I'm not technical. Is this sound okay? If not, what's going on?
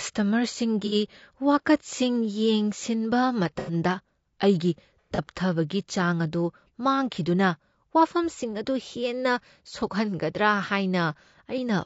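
No. Two problems can be heard.

The first runs through the whole clip: low-delay AAC compression, the kind of squeezing video-call apps use to send audio quickly. To keep the delay tiny it slices sound into very short pieces, and the speech here comes out rough and grainy, with a hiss tucked between the tones and a thin, slightly artificial edge on top. The likely cause is this call-style compression. Background noise would sit evenly behind the voice; this roughness is woven into the voice itself.

The second is AAC frame loss with concealment, at about 0.86, 3.59 and 5.15 seconds. Each time, a small chunk of the sound went missing, and the playback software covered the hole by reusing and blending what it had just heard. Each patch lasts only a fraction of a second and sounds smeared, noisy or oddly hollow. It is not a silent gap or a click, as a plain dropout would be.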